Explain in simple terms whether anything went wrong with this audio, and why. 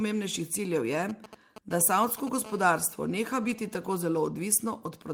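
Right after "ciljev je", from 1.09 to 2.29 s, you get GSM signalling bursts: a nearby 2G phone pinging the network, picked up as galloping ticks and short 217 Hz buzzes.

From 2.45 to 4.04 s, that phone seems to be in a call, so it becomes steady GSM phone buzz, a hard, raspy 217 Hz drone.

At 3.43 to 3.53 s, a lost packet rebuilt from error correction leaves about 60 ms sounding rougher and noisier. That fits roughly three packets being patched from backup copies.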